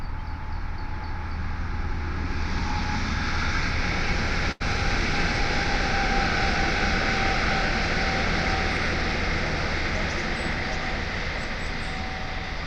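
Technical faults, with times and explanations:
4.51–4.62 s: short stall from a late packet. The jitter buffer ran dry, so the last sound was stretched for about 88 ms until the packet arrived. Unlike a dropout, nothing is cut out; playback resumes from the same place, simply 88 ms later.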